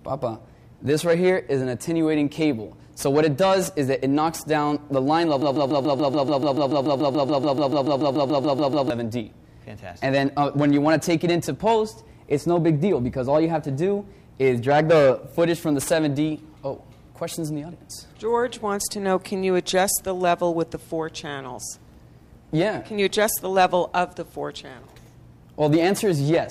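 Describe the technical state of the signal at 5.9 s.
At 5.9 s the signal is caught in a broken-record loop that runs from 5.42 s to 8.90 s. A fragment of about 144 ms repeats identically, back to back, some two dozen times, producing a rapid mechanical stutter at roughly seven cycles per second. The likely cause is a stalled player, encoder or stream that kept resending the last buffered fragment. Whatever audio belonged in that stretch is missing rather than delayed.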